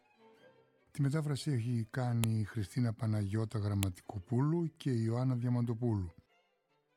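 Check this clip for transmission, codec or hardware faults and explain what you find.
Two sharp clicks mark a fault, at 2.24 s and 3.83 s: a file header played as audio. Joined WAV pieces kept their headers, so header bytes play as samples, giving a loud snap. A waveform shows a spike there, a spectrogram a thin full-band vertical line.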